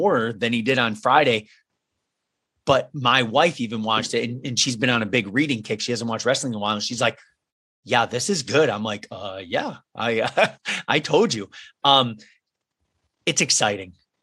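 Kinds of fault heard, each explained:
No kinds of fault are heard in the speech.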